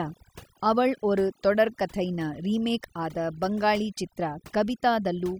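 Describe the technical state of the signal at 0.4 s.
At 0.4 s you're hearing overdone noise removal, present throughout the clip. The reducer clamps bands near its noise estimate, leaving twinkly near-silence.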